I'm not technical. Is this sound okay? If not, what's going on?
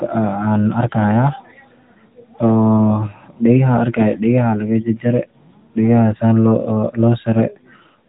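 No. Throughout, the speech has been squeezed through the AMR narrowband mobile codec: nothing above 3.8 kHz survives, so it sounds muffled, buzzy and phone-like.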